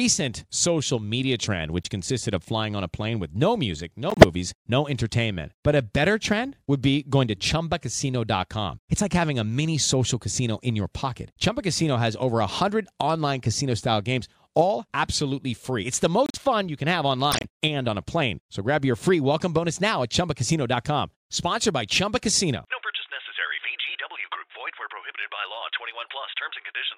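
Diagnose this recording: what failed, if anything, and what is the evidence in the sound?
Codec stage: corrupt frames decoded. Brief chirps and noise bursts at 1.83, 4.10, 16.26, 17.32 and 26.01 s. The decoder played damaged frames, scattering energy across wrong frequencies.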